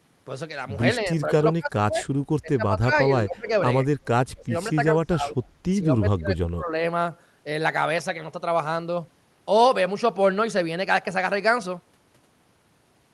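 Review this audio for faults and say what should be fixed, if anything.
Speech suppressed in double talk at 1.04–2.09, 2.42–3.07, 3.24–3.49, 4.27–4.54, 4.75–5.37 and 5.82–6.83 s: the speech repeatedly sinks, by roughly 15 to 30 dB at its deepest, likely because the echo canceller could not separate near-end speech from the echo of simultaneous far-end talk and attenuated everything. Tune the echo canceller's double-talk detection and use less aggressive residual-echo suppression so near-end speech passes while the far side talks.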